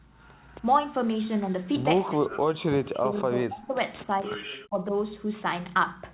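From 2.06 to 3.75 s the speech drops out in pieces, falling by roughly 40 dB, then dips by about 10 dB at 4.03 to 4.27 s and cuts deeply again at 4.47 to 4.94 s. This is likely speech suppressed in double talk: the echo canceller could not separate the talker from the overlapping far-end echo and turned the talker down, all within audio already narrowed to 4 kHz by the G.711 call path.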